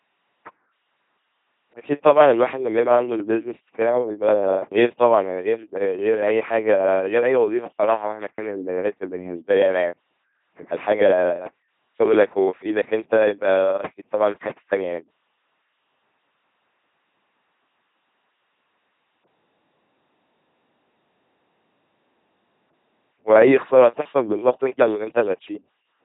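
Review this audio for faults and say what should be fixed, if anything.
The speech has been passed through an LPC-10 vocoder for its whole length. It rebuilds each moment from a ten-pole vocal tract model driven by either a pulse train or noise, with no blend of the two. The result is a heavily damaged, buzzing, robotic voice, with buzz or hiss wherever the voiced/unvoiced choice misfires. The sound points to the 2.4 kbit/s rate, and nothing remains above 3.8 kHz. To prevent it, carry the speech over a modern waveform or hybrid codec at a higher bitrate instead of LPC-10.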